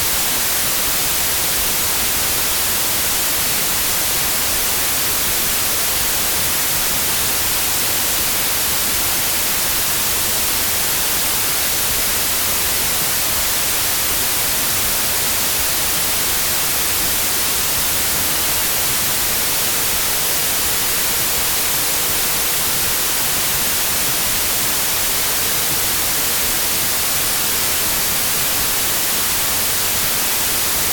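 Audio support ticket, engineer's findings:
Wrong sample width, whole clip. Loud broadband noise, original sound buried underneath, running at 0.667x speed with pitch lowered by the same ratio. Probable component: file reader or decoder format setting. Byte pattern fits packed 24-bit samples read as 16-bit, splicing mismatched bytes into many values.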